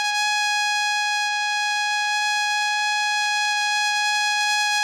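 Nothing stood out on listening to this piece of music.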